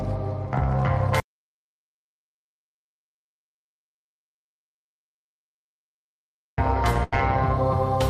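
Audio dropout to silence from 1.2 to 6.58 s: the input was likely lost while writing continued, leaving about 5.4 s of silence without room tone. A burst of packet loss at 7.03 to 7.14 s follows: the receiver stretched the last sound for 85 ms, letting it fade, then resumed with roughly 80 ms missing.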